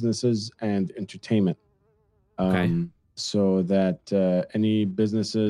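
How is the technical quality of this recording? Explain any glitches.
No technical glitches can be heard anywhere in the recording; the signal stays steady and intact throughout.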